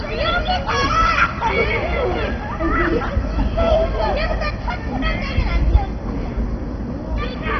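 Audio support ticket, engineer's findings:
Dull, gurgling, granular sound throughout; no content above about 6.1 kHz. Likely MP2 compression at a very low bitrate, near 32 kbps: upper sub-bands switched off, surviving bands coarsely quantised. Unlike a plain low-pass, bands flicker and the grain remains.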